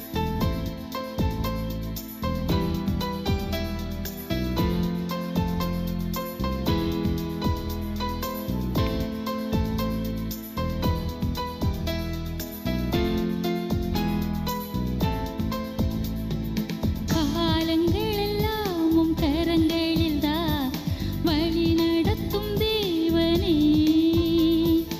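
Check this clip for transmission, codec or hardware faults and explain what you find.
Nothing here points to a transmission, codec or hardware problem, so there's nothing to flag.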